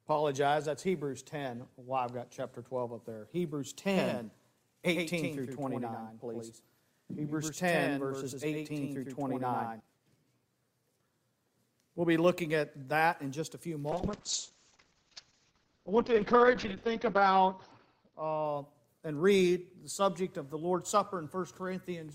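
A doubled audio track runs from 3.94 s to 9.80 s: a second, full-band copy of the same audio trails the original by around a tenth of a second, about 5 dB quieter. It likely comes from the signal being picked up again through a slower route, so two copies play out of step. It sounds like a hard, flat slapback with no decay or room colour, and it switches on and off abruptly at those times.

A call bitrate drop follows from 13.93 s to 19.51 s. The connection's bandwidth estimate fell, so the encoder was forced to spend far fewer bits. The sound points to a fall from around 64 kbps to about 7 kbps. Coding turns coarse and the top end shrinks from 20 kHz to 6 kHz, so the audio goes muffled, rough and watery. It is worst for roughly 3.3 s before quality climbs back.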